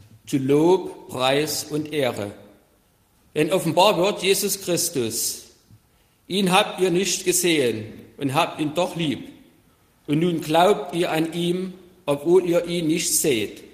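Nothing in the audio stood out as a technical fault on listening.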